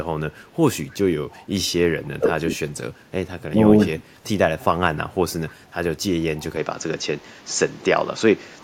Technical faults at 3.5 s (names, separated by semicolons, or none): speech suppressed in double talk